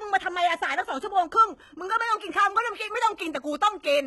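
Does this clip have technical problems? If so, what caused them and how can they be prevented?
Yes. Heavy HE-AAC compression damage runs throughout. Treble above 11.8 kHz is gone. Sibilants sound gritty and metallic. This is likely rebuilt treble at a low bitrate near 16 kbps. Encode at a higher bitrate, or use a full-band codec.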